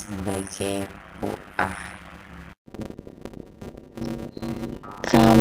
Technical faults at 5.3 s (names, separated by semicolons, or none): block size mismatch (padded)